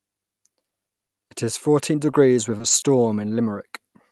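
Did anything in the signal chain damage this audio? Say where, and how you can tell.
Yes. The network stage repeatedly lost or delayed packets on this call, so the receiver's concealment kept patching holes. This is repeated packet loss, heard as robotic sound. From 0.69 to 1.46 s there are four short dropouts, the longest about 30 ms, filled by extending the previous sound. From 2.58 to 2.84 s four more follow closely, the longest about 20 ms, with nearly a third of that stretch synthesised. The speech turns choppy, with fragments missing.

A single short concealed packet loss sits at 2.11 to 2.15 s, again at the network and jitter-buffer stage. About 20 ms never arrived in time, so the decoder continued the preceding sound, pitch-based if voiced and shaped noise if not, then crossfaded back into the real signal. The result is a brief smear or wobble, and a quick consonant there can vanish. 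The Opus call path limits the top end to about 12 kHz, which fits roughly 40 kbps.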